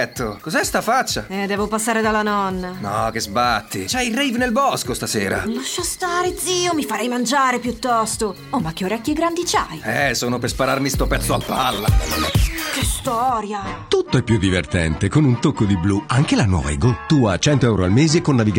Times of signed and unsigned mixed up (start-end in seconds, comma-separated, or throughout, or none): none